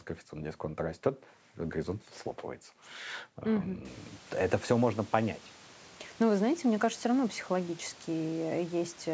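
No technical faults can be heard in this speech clip. The room's background noise rises by about 23 dB around 4 seconds in but stays about 27 dB below the speech, and the call's microphone processing leaves nothing above 8 kHz.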